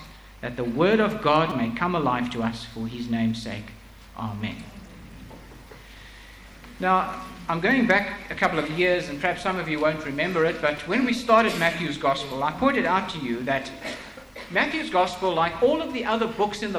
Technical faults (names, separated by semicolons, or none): hard clipping; repeated buffer